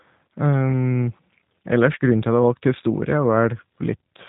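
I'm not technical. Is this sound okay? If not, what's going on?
No. Throughout, the speech sounds muffled and slightly rough, a bit robotic, like an old internet phone call. That comes from the G.729 codec, which squeezes speech hard by rebuilding it from a rough model of the voice, discarding all the higher sounds.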